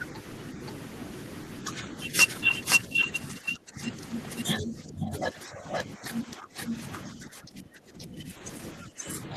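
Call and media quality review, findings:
Doubled audio track, whole clip: full-band second copy about half a second behind, at roughly equal level, dry, no room colour. Likely cause is a slower second capture path, or an edit holding two unaligned copies.

Speech suppressed in double talk, 2.89–3.92 s, 4.59–6.74 s, and 7.05 s to the end: talker drops by roughly 15 dB. Likely cause is the echo canceller confusing near-end speech with loudspeaker echo and attenuating both.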